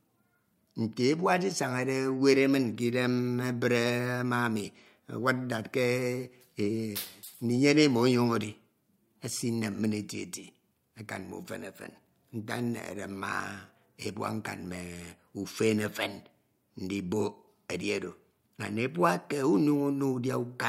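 Right after "ma ami", at 5.22 s, the speech abruptly loses its top-end sparkle and takes on a swirly, processed edge, with nothing audible above 16.6 kHz. At 7.22 s, two seconds later, it snaps back to full quality without any gap. This is an adaptive stream at a lower bitrate: the player briefly switched to a cheaper encoding while the connection slowed, a change from roughly 128 kbit/s MP3 down to around 66 kbit/s.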